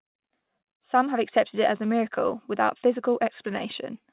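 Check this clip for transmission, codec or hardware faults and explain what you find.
Two transmission faults are present in this speech: a short stall near the start and clock drift across the whole clip. The call codec path works normally, and its hard ceiling at 4 kHz fits G.711 mu-law at 64 kbps.

Short stall from a late packet, 0.08 to 0.14 s: a packet arrived late, so the jitter buffer ran dry and the receiver held the previous sound for about 32 ms. Nothing is lost, but the sound briefly freezes. On a spectrogram this appears as horizontally smeared, unchanging bands; the waveform shows a short repeating stretch.

Clock drift between sender and receiver, throughout: the sender's clock runs about 2 percent slow, so the buffer keeps draining and the receiver keeps stretching or padding brief pieces. This produces small, irregularly spaced timing hiccups, visible as scattered tiny discontinuities or repeated slivers in the waveform.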